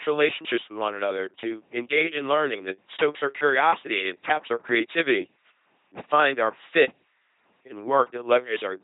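The speech has been passed through an LPC-10 vocoder for its whole length. Instead of carrying the waveform, the codec keeps only a short all-pole filter per frame and excites it with either a pulse train or noise, with nothing in between. The result is a heavily damaged, buzzing robotic voice with hiss wherever voicing is misjudged and no energy above 3.8 kHz, consistent with the 2.4 kbit/s rate.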